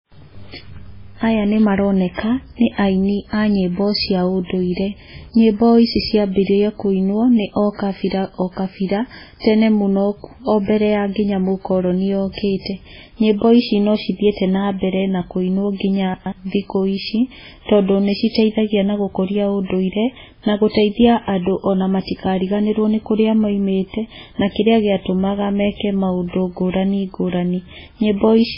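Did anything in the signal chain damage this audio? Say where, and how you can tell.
Yes. Throughout the speech there's heavy watery, swirly smearing and nothing above 5.3 kHz. That's likely MP3 compression at the codec stage, starved of bits in a way that fits roughly 16 kbps, so weak frequency lines drop in and out between frames and the top end is chopped off.

Around 16.14 to 16.32 s there's a jumbled moment: chunks out of order. A 60 ms chunk turns up two chunks late, either in network delivery or when written to storage, so it plays after its successors. Nothing's missing, but three hard joins scramble the sequence.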